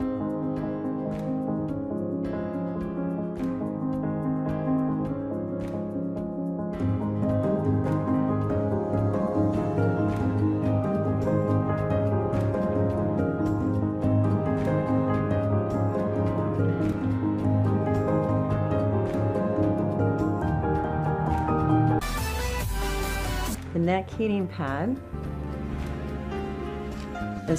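No technical faults can be heard anywhere in the clip. Nothing in the audio points to a problem in how it was captured, processed or delivered.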